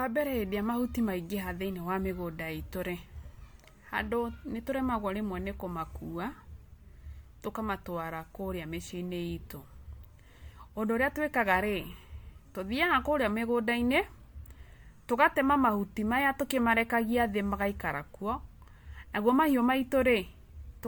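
Throughout, the speech shows generation loss: swirly and hollow with blurred onsets, likely from repeated MP3 re-encoding. The spectrogram shows scattered holes and nothing above 19.9 kHz.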